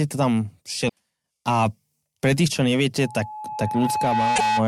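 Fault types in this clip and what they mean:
Damaged data in a compressed stream: corrupted frames make the decoder lose sync and search for the next header, producing short blips near 0.85 s and from 4.33 to 4.41 s.
Loudspeaker feedback squeal: the microphone picks up its own loudspeaker, so an 851 Hz tone swells from 3.02 s over about 1.5 s to roughly speech level.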